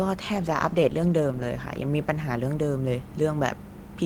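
Speech with a call bitrate drop from 0.35 to 2.77 s: the sound turns rough and muffled, worst for about 1.11 s, which fits the encoder falling from around 40 to 15 kbps. A spectrogram shows the upper band cut away and coarser, smeared detail until recovery.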